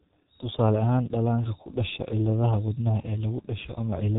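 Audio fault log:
throughout G.723.1 codec: the speech stops sharply at 3.8 kHz, leaving it muffled. Heavy coding damage makes it hoarse with smeared consonants, because the codec's voice model updates only every 30 ms frame. The degree of damage fits a bitrate near 6.3 kbit/s.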